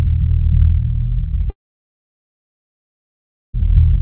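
At 1.5 s the music breaks off and doesn't return until about 3.55 s. The last moment of sound is stretched into a short fading buzz, then there's essentially silence for around two seconds. That's a long network dropout, likely packets that never reached the receiver, with the concealment giving up quickly. When the music resumes, the missing stretch of roughly 2.04 s is simply gone, still band-limited to 4 kHz by the G.711 call codec.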